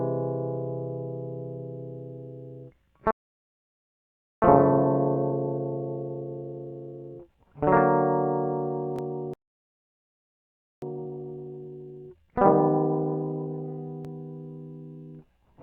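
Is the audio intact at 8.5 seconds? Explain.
Yes, the music plays through 8.5 seconds cleanly, with no dropout, click, distortion or other fault at that point.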